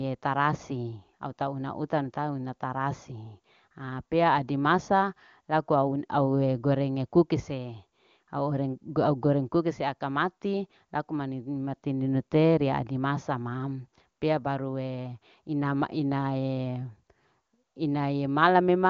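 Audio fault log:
The speech comes through the AMR wideband (HD Voice) codec with content stopping near 7.2 kHz and little audible coding damage, which fits its top 23.85 kbit/s mode.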